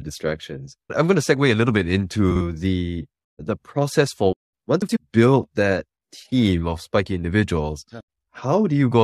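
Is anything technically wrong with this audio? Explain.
Yes, there are two instances of frames out of order. Twice, two adjacent runs of frames were decoded in swapped order, so each stretch plays with its halves exchanged, giving a garbled flutter but no lost time. The first is at 2.31 to 2.41 s, just after "segue a little bit", with a 46.4 ms block that fits two frames per run. The second is at 4.82 to 4.97 s, after "the the process for", with a 69.7 ms block that fits three frames per run.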